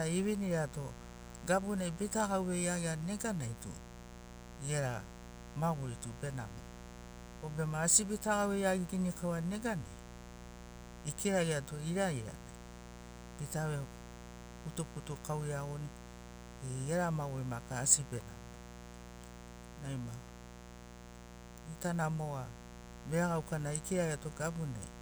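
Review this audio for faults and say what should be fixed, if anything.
There's a raspy mains buzz under the speech the whole way through, sitting roughly 15 dB below it, built from 60 Hz harmonics. Sharp spikes twice per cycle spread it up into the kilohertz range. Next time, shield the cables, keep dimmers and rectified supplies off the audio circuit, and fix any ground loops.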